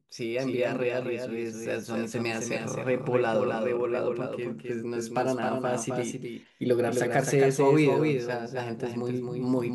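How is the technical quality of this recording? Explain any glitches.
The recording has one clear technical problem: the speech is doubled throughout. A second, full-band copy trails the original by roughly 300 ms, sitting around 5 dB lower, so every syllable gets a distinct, slightly softer repeat. This doubled audio track is likely a second capture of the same signal through a slower path being mixed back in, or an edit holding two copies out of step. The copy carries no reverb tail or room colouring. On a spectrogram, each speech burst is mirrored by a fainter, identically shaped pattern shifted right by about a third of a second, and the waveform shows matching echoed envelopes at that fixed offset.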